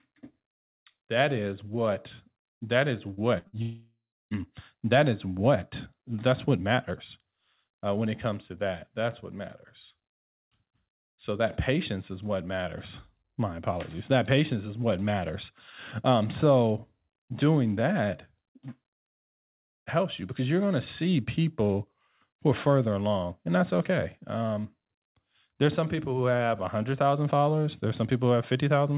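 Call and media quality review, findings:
Short concealed packet loss, 3.14–3.20 s: brief smear where about 30 ms never reached the decoder in time. The receiver extended the last sound and then blended back.

Burst of packet loss, 3.38–3.47 s and 3.47–3.56 s: two back-to-back gaps of about 60 ms each. Concealment holds the last sound and fades it, and the audio resumes with that stretch missing.

Long network dropout, 3.62–4.34 s: about 690 ms lost. A fading continuation gives way to roughly 310 ms of silence before the audio returns further on. Likely cause is nothing arriving from the network over that stretch.

All of this sits on the call path's hard cut at 4 kHz, which fits G.711 mu-law at 64 kbps.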